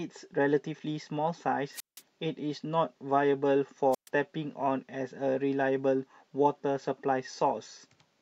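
At 1.73 s the speech hits a wireless microphone squelch dropout: hiss rises as the radio link from the analogue FM transmitter weakens, then the receiver's squelch mutes the output for about 172 ms before the signal recovers at 2.01 s. A second dropout follows at 3.91 s, with a shorter mute of about 126 ms, and the sound returns by 4.09 s. Each appears as a brief burst of static, then a hole of near silence.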